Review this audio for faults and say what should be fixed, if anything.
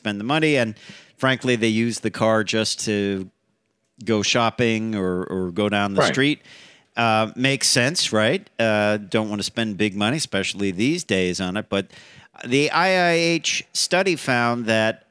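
Nothing in the speech signal calls for a fix, as it holds steady and intact the whole way with no technical faults to report.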